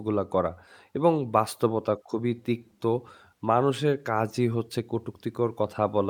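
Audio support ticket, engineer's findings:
No faults found in the audio path; nothing to report.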